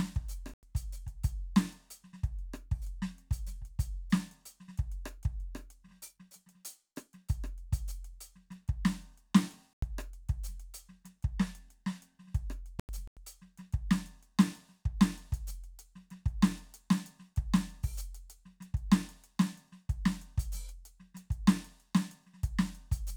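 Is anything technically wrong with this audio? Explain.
Yes. The music has three corrupt frame muted gaps, at 0.54–0.63 s, 9.73–9.83 s and 12.80–13.17 s. Damaged compressed frames were rejected by the decoder and replaced with silence, so the sound stops abruptly. Unlike a buffer dropout, the timing stays intact and the music resumes on beat.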